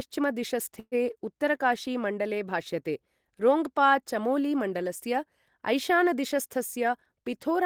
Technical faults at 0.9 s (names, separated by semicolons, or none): call audio freeze